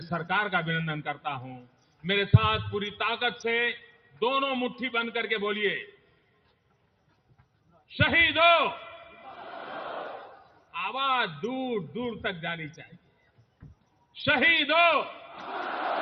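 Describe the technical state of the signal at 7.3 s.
At 7.3 s the signal sits inside a stretch, from 5.9 to 7.9 s, where sound is cut by the noise suppressor. It mistakes this material for noise and pulls it down by up to about 12 dB, about a second and a half in total. Sustained parts sink and their decays end early. On a spectrogram the harmonics and tails fade into dark gaps, while the waveform envelope caves in between surviving transients.

This sits on a noise suppressor applied to music or sounds, active across the whole clip. Tuned for speech, it treats steady tones and reverb as noise, so the gain swings by around 10 dB, making held material pump and thin. The waveform shows a breathing envelope, and the spectrogram shows blotchy, intermittent tails.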